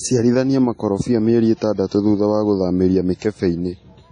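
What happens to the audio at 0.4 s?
At 0.4 s you're hearing the same damage that runs through the whole clip: it sounds like WMA compression, likely at a low bitrate, something like 32 kbps. Long transform blocks smear quantisation noise, so the speech rings and washes with a breathing hiss, and nothing survives above 10.1 kHz.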